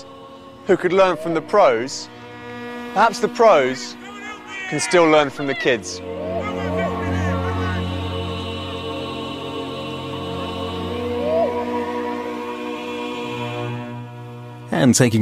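No technical faults can be heard anywhere here.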